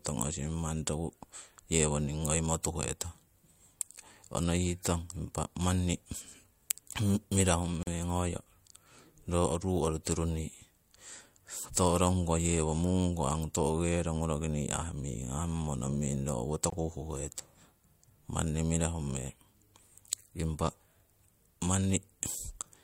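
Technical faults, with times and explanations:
7.83–7.87 s and 16.70–16.72 s: gap at a join of encoded pieces. The speech stops for about 41 ms, then again for about 22 ms. Each time it resumes exactly where it broke off. The pieces were encoded separately and butted together untrimmed. So each join keeps the encoder's start-up silence and the padding of the previous piece's last frame. The edges are blurred by the codec.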